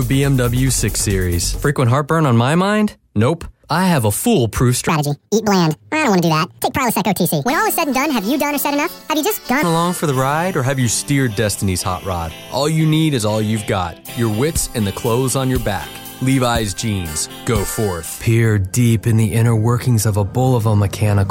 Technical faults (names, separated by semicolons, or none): section at the wrong speed